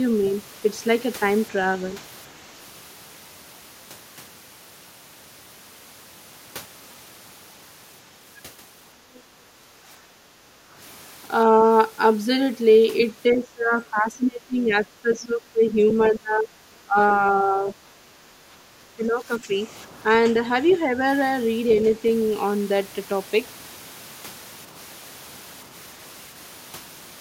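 At 0.26 s and again at 9.14 s, brief scraps of a second voice appear, faint and well below the main talker. This is the other side's voice leaking through, likely loudspeaker echo the canceller failed to remove. It adds a sound rather than removing one.

From 10.23 to 10.33 s the talker's own speech sinks by roughly 15 dB. This is speech suppressed in double talk, likely the canceller turning everything down when both sides spoke at once. Unlike the leak, this loses level instead of adding a voice.

Between 10.61 and 10.74 s the room background, not the speech, drops by about 8 dB and then returns. This is background gated by the echo canceller: it clamped the microphone while the loudspeaker played.

The double-talk suppression returns for longer stretches from 13.32 to 17.77 s and from 18.61 to 21.01 s. The talker dips by roughly 15 dB in pieces adding up to a few seconds, and again for about a second and a half. 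Inside that second stretch, at 20.69 s, another brief leaking scrap of the other side's voice is heard, the strongest of the three.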